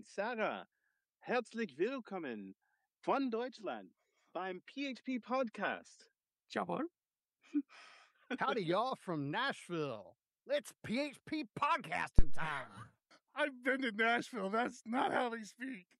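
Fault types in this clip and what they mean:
Phantom power thump: a single deep, low-frequency thud lands at 12.19 s and dies away over about 80 ms, with its tail gone by 12.54 s. It peaks at about -12 dBFS. The cause is a supply being switched on or off while the input was live. The sudden DC step passed through the coupling capacitors, which turned it into this brief, heavily damped pulse.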